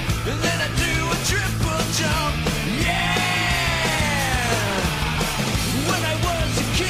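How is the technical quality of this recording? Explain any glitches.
Nothing in the recording stood out as a glitch or technical problem on listening.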